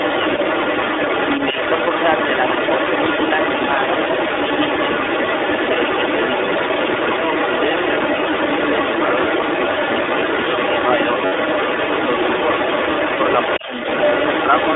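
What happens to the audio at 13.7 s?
The speech dips by about 10 dB for roughly 200 ms, from 13.59 to 13.77 s. This is speech suppressed in double talk, likely caused by the echo canceller turning everything down while both sides spoke at once. Underneath, the other side's voice leaking through is present here as across the whole clip, sitting at around 5 dB above the speech. It is likely residual loudspeaker echo that the canceller left in the microphone signal. The sound is also narrowband, confined to roughly 300 Hz to 3.6 kHz, with a rough, synthetic edge. That comes from the iLBC codec, whose independently coded frames fit a 20 ms, 15.2 kbps mode.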